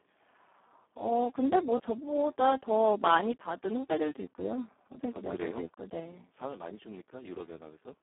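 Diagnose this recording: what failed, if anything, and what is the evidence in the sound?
The speech is hoarse, buzzy and close to robotic for the whole recording, with a thin telephone-like band running from about 250 Hz to 3.4 kHz and nothing at all above 3.8 kHz. This is a codec-stage fault: heavy Speex codec damage. The CELP coder has almost no bits left to describe the excitation, so a coarse, noisy approximation replaces the natural voicing. That degradation points to a very low setting, around 4 kbps.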